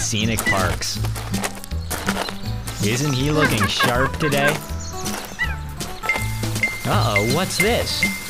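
No technical faults can be heard anywhere in this audio.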